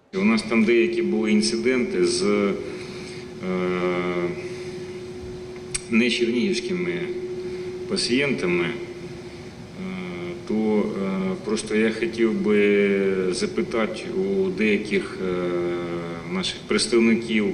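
No technical faults are audible.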